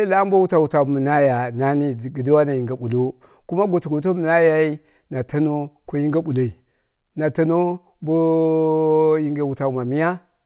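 No technical faults can be heard in this speech recording. It has passed through a call path whose band stops at 4 kHz, which fits narrowband G.711 A-law coding at 64 kbps, and that path is working as it should.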